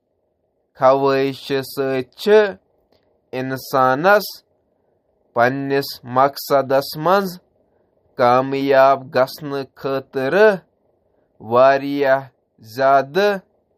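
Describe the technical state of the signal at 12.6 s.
At 12.6 s the speech carries audible MP3 compression throughout, likely from a low bitrate near 48 kbps. It sounds watery and swirly, and a spectrogram shows a hard ceiling at 15.2 kHz with flickering gaps below.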